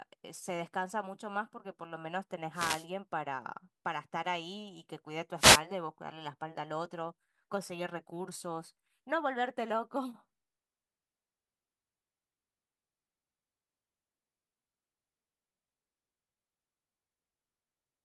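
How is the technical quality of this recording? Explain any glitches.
Two short bursts of static break into the speech, from 2.52 to 2.87 s and again from 5.35 to 5.62 s. These are wireless microphone noise hits: reflections briefly cancel the analogue FM radio signal, and receiver hiss surges up.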